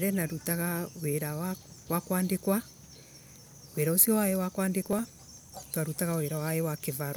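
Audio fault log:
4.83–4.99 s, processor overload crackle: just after "ucio wa" the speech breaks into a short burst of gritty crackle lasting about a sixth of a second, then clears. The processor fell behind and missed a run of its audio deadlines. Each missed buffer was skipped outright rather than filled, so the sound jumps forward with hard-edged gaps. The spacing points to buffers of around 5 ms, with roughly seven lost over the stretch.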